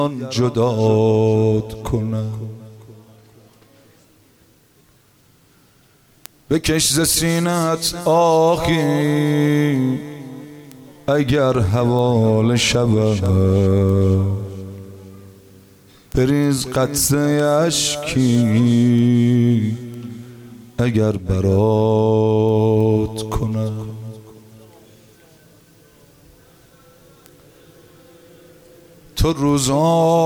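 From 0.21 s to 30.13 s, word clock ticks recur about every 0.3 s, roughly a hundred sharp clicks of uneven strength, from an unsynchronised digital link drifting some 70 ppm and slipping single samples. Spectrograms show thin full-height vertical lines; waveforms show isolated brief spikes.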